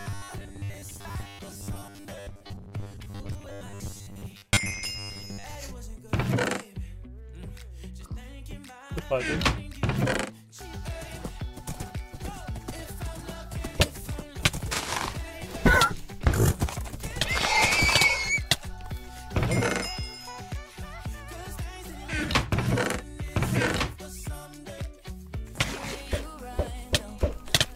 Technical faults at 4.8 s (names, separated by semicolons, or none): robotic sound from repeated short buffers